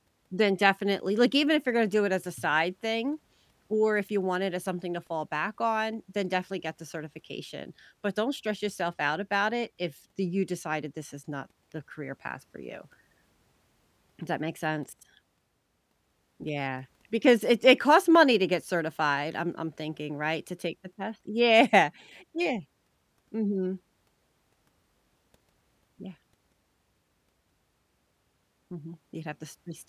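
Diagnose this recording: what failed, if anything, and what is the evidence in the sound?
Nothing failed in this recording; the sound gives no evidence of a fault at any stage.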